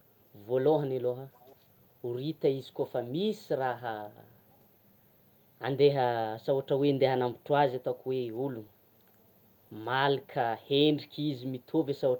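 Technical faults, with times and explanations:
1.33–1.56 s, echo leak: a faint, delayed copy of the speech trails the original by about 287 ms, sitting roughly 30 dB below it and lasting only a fraction of a second. The likely cause is a far-end echo canceller letting some of its loudspeaker's output back into the microphone. Unlike room reverberation, which smears smoothly into the tail of each sound, this is a distinct, separate repeat arriving well after the original.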